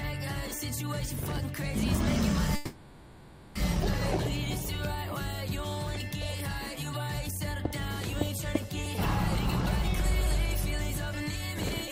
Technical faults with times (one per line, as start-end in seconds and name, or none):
2.55-3.57 call audio freeze